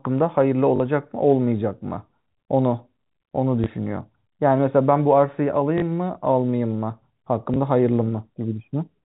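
Speech over a telephone-band G.711 path, with packet loss with the last packet repeated at 0.76–0.80, 3.64–3.66, 5.78–5.82 and 7.54–7.56 s: brief buzzing stutters where two packets repeat and small blips where one does, repeating the same sound, unlike silent dropouts or smooth concealment fades.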